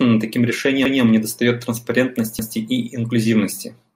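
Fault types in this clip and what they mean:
Repeated buffer, at 0.85 to 1.02 s and again at 2.39 to 2.56 s: fresh audio failed to reach the output in time, so the device replayed the block it had just played. Each time, a 0.17 s piece of speech is heard twice in a row, with an abrupt join where the copy starts. This is a short stutter, not a click, and its length fits an 8192-sample buffer. Essentially no audio appears to be lost.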